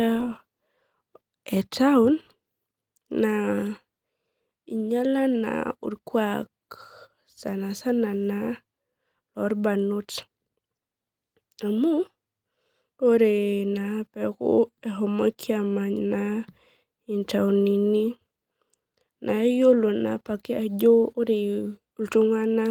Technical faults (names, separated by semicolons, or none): none